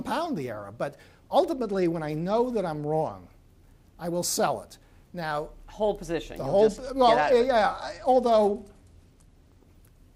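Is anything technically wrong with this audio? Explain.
Yes. There are two Bluetooth SBC bit pool drops, from 1.50 to 3.12 s and from 6.61 to 9.65 s. Each time, a congested link made the sender cut the bits per frame, consistent with the bit pool falling from 28 to about 13, near 102 kbps. The highest sub-bands get almost nothing, and the rest are coarsely quantised. The treble goes dull and a gritty noise rises. Both clear when the rate recovers.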